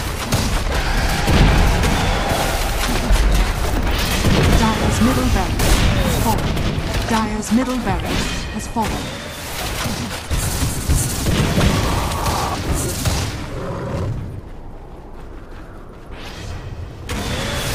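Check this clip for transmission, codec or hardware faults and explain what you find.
Nothing to report: no transmission, codec or hardware faults turn up anywhere in the clip.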